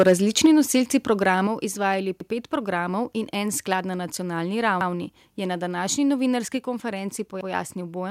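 Speech, opening with a microphone overload from 0.00 to 0.13 s: peaks run about 5 dB past the converter's limit and roughly one sample in twenty is flattened, giving a harsh crackle, likely from input gain set too high. The level then drops abruptly three times, consistent with the microphone volume being stepped down by automatic gain control: about 3 dB at 0.46 s, about 5 dB at 1.47 s just before "izvajali pet programov in", and about 2 dB at 6.57 s. Overlapping chunks produce a short stutter at 2.21 s before "pet programov in en", at 4.81 s before "je na", and at 7.41 s, where 100 ms of audio repeats at the joins between 2.5 s chunks.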